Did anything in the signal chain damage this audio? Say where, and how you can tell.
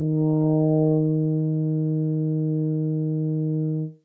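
No, the music shows no damage from any stage.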